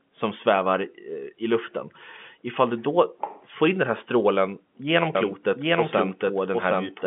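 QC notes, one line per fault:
5.15 s to end, doubled audio track: a second full-band copy of the speech enters abruptly and runs about 0.7 s behind at roughly equal level, dry with no decay; likely a slower second capture path mixed in alongside the telephone-band feed.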